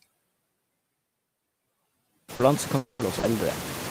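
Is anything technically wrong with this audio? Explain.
Yes. Several processing and network faults are audible in this speech clip.

Noise suppressor artifacts run through the whole clip. The suppressor estimates which frequency bands hold steady noise and pulls them down frame by frame, by about 18 dB here. The background therefore drops in the pauses and comes back up under the talker. This is most obvious after about 2.5 s, when the room noise rises by roughly 18 dB and sits about 14 dB below the speech.

Short concealed packet loss occurs twice, from 2.35 to 2.42 s and from 3.19 to 3.26 s. Each time about 40 ms of audio failed to reach the decoder in time. The receiver covered the hole by extending the preceding sound, following its pitch if voiced or as shaped noise if not, then cross-faded back into the real signal. The result is a brief smear or wobble.

A lost packet rebuilt from error correction appears three times, at 2.39 to 2.41 s, 2.99 to 3.01 s and 3.23 to 3.25 s, each covering 20 ms. 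The packet following each loss carried a low-bitrate Opus in-band FEC copy, and the decoder played that copy instead of leaving a gap. These frames sound rougher and noisier than their neighbours.

From 2.77 to 3.02 s there is a stretch of about 220 ms where the original audio is missing, most likely a long network dropout. The entire gap was filled by concealment, so there is no silence. Instead, the last sound is extended as a buzzy or hissy continuation that decays over the span. The speech then resumes further along, without the section that was lost.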